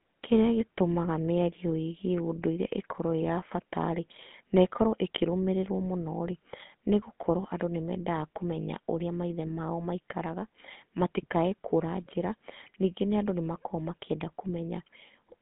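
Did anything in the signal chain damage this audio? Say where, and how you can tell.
Yes, at the codec stage: a GSM full-rate codec squeezed the speech throughout, consistent with its 13 kbps mode. Content sits between 150 Hz and 3.7 kHz, nothing above 3.8 kHz, and the coarsely pulsed, decimated excitation leaves a plainly audible buzzy, gravelly roughness.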